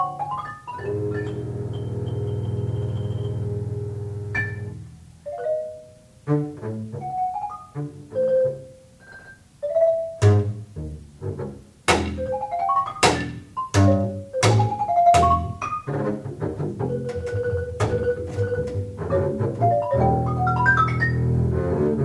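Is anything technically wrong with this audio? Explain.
No, nothing here sounds technically off; it all comes across just as it should.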